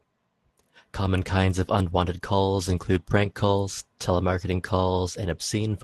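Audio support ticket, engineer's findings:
Nothing to flag on this speech clip; it sounds like an ordinary call path with the top end rolled off around 12 kHz, and no dropouts, glitches or other problems turned up anywhere in it.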